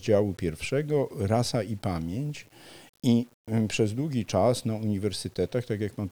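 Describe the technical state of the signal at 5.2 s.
At 5.2 s the speech carries gritty, signal-following distortion from low bit depth without dither, present throughout, likely 8-bit rounding. Its noise sits roughly 35 dB down, showing as a staircased waveform and a broadband haze.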